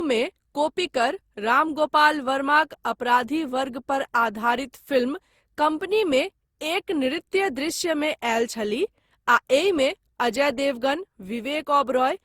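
From start to finish the speech sounds swirly, smeared and hollow. Attacks blur. This is generation loss, likely from about seven re-encodes, in a way that fits Opus at 64 kbit/s. Each pass quantises on a new frame grid, so noise piles up.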